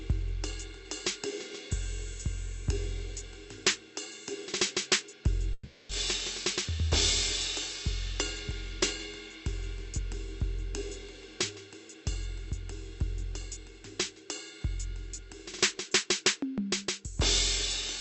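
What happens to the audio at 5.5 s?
A long network dropout is the likely cause here. From 5.53 to 5.92 s no audio reached the receiver, which stretched the last moment of music into a fading buzz or hiss for about 0.36 s. The music then resumes with that stretch missing.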